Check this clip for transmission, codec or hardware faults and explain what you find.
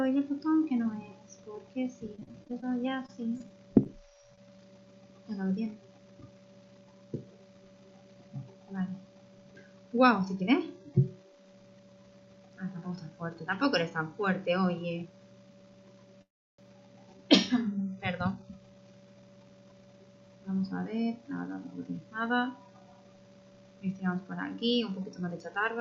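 Three network-related faults can be heard, all typical of audio sent over a call or streaming link.

From 2.15 to 4.60 s the sound turns choppy and robotic, broken by sixteen short dropouts, none longer than 32 ms. This is repeated packet loss: each missing packet was bridged by stretching the previous sound, and 220 ms of real audio is gone.

From 16.22 to 16.60 s the sound halts and trails off into near silence, then resumes exactly where it stopped. The likely cause is a call audio freeze. Delayed packets drained the jitter buffer, inserting a 368 ms pause without losing any audio.

From 18.28 to 21.01 s the sound runs hurried, at 112% speed, with unchanged pitch. This is a jitter buffer speed-up. With surplus audio queued, the receiver cut many tiny pitch-period slices, around a third of a second in total, to catch up.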